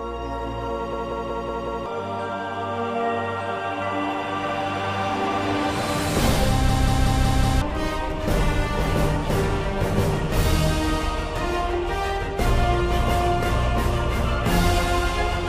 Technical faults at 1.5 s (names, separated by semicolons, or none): system hang loop